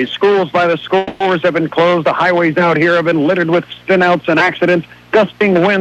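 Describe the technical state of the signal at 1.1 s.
At 1.1 s the signal is inside a call audio freeze, running from 0.97 to 1.22 s. The last sound is stretched into a fading buzz or hiss for about 230 ms, with no silence. Delayed packets likely emptied the jitter buffer. Audio then resumes where it stopped, later but complete.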